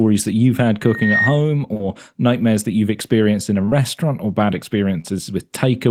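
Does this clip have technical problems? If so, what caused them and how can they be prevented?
Yes. From 0.83 to 1.43 s a loudspeaker feedback squeal grows over roughly a third of a second into a steady 1.9 kHz tone about as loud as the speech. Its self-building swell distinguishes it from a fixed interfering whistle. Preventing it means lowering monitor gain, moving the microphone away from the speaker, or notching 1.9 kHz.

Short concealed packet loss smears the speech at 1.73 to 1.81 s, 3.65 to 3.73 s, and 5.01 to 5.06 s. The gaps fit lost 20 ms packets that the decoder filled with extrapolated sound rather than silence, unlike a hard dropout. Preventing it means using a steadier network connection or a larger jitter buffer.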